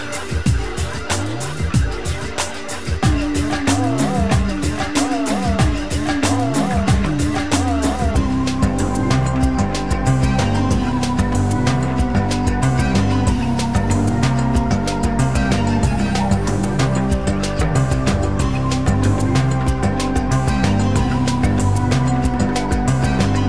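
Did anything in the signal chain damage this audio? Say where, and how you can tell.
No, no signal-chain damage heard.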